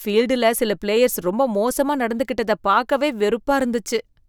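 No technical faults can be heard anywhere in the recording.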